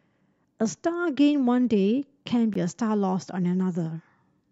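At 2.54 s the speech drops to silence for 14 ms, then resumes. This is likely a Bluetooth stall, the headphone buffer briefly running dry.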